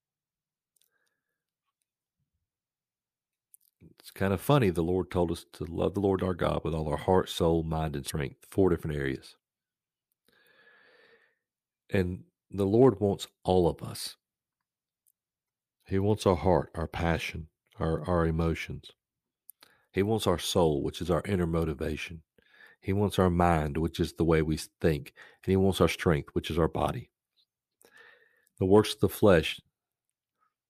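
Damaged data in a compressed stream breaks decoder sync at 8.06–8.11 s, after "heart soul mind and", and at 15.45–15.48 s, each a brief break in the sound.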